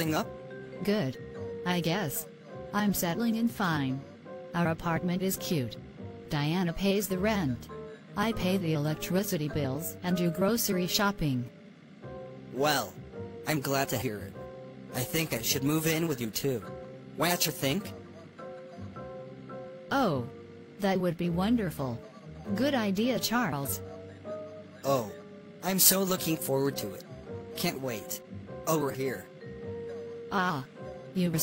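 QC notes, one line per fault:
No faults found on this pass; nothing to log.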